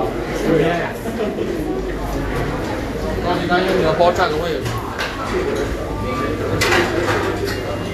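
Right from the start and all the way through, the audio carries what's likely Vorbis compression at a low setting, something around 35 kbps by the sound of it. Nothing survives above 14.2 kHz, and the treble that remains is grainy and hissy, with tones roughened and attacks smeared.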